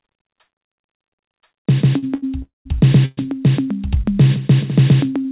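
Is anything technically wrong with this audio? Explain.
Yes, there are timing faults in this music, all heard through a call codec that leaves nothing above 4 kHz.

There are three short stalls from a late packet, at 1.98 to 2.04 s, 2.14 to 2.24 s and 5.21 to 5.26 s. Each time a packet showed up late, the jitter buffer ran dry, and the receiver stretched the last bit of sound to cover the wait: about 44 ms, 80 ms and 38 ms. You hear a held smear with a slight buzz or dip, and then the music picks up exactly where it left off, just later.

There are two call audio freezes, from 2.42 to 2.67 s and from 3.05 to 3.19 s. The music hangs and turns into a fading buzz or hiss. In the first freeze, the gap of roughly 230 ms includes about 150 ms of outright silence. The second holds for 120 ms without going quiet. Both times the music resumes from the same spot, so nothing is skipped, only delayed. 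That pattern likely comes from packets getting held up in transit.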